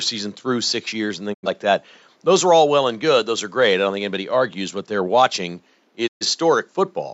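A speech recording with two digital broadcast dropouts, where the receiver lost valid frames and muted until clean ones arrived. At 1.32 to 1.48 s roughly 85 ms goes missing, which fits two lost frames, and at 6.06 to 6.26 s about 128 ms, consistent with three. Each time the sound fades out over about 20 ms into silence and then resumes. Whatever was transmitted during those gaps is gone, while faint room noise sits about 42 dB under the speech.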